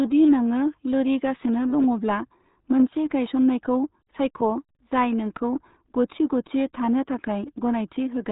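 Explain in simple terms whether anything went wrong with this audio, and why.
Something did go wrong, from start to finish. The speech has been squeezed through the RealAudio 14.4 codec, an old dial-up format. It throws away everything above about 3.8 kHz, so the voice sounds muffled. Heavy damage makes it gargly and smeared.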